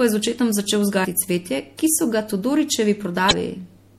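MP3 compression damage runs through the whole of this short speech recording and is plainly audible. The upper detail has a watery, swirling quality, with sibilants turning metallic and consonant attacks smeared. This likely comes from an encoder starved of bits, one that fits a low setting around 64 kbps. Short of bits, it lets weak frequency lines flicker in and out between frames.

Damaged data in a compressed stream produces a brief glitch from 3.28 to 3.33 s, about 44 ms. Corrupted bytes in the encoded file at that point make the decoder misread the affected frames and lose its place. It then hunts for the next valid frame header before playback resumes.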